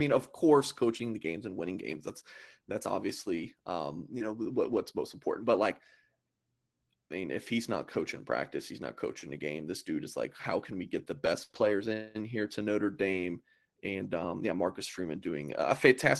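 Brief rough, grainy patches sit at 3.33–3.43 s just before "um you know what", then at 4.71–4.77 s and 7.93–7.95 s. Each is a lost packet rebuilt from error correction: the following packet carried a low-bitrate copy, so nothing drops out, but the rebuilt 20–60 ms sounds coarser and noisier.

At 11.43–11.51 s the sound turns into a fading, held smear and then resumes further on. This is a burst of packet loss: about 60 ms never arrived, and the receiver stretched the last sound while turning it down.

From 11.51 to 11.55 s a short wobble follows. This short concealed packet loss filled a roughly 20 ms hole by extrapolating the preceding audio before blending back into the real signal.

Immediately after, from 11.55 to 11.69 s before "in here to", a longer grainy stretch marks another lost packet rebuilt from error correction, about 80 ms of low-bitrate copies. The same roughness returns at 13.13–13.19 s and at 13.99–14.05 s just before "um yeah", each about 40 ms. 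All of it passed through an Opus call path at 24 kbps with a 12 kHz bandwidth.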